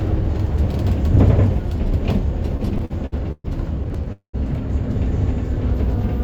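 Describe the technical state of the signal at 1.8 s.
At 1.8 s the signal is intact, with no audible technical fault in the sound at that moment.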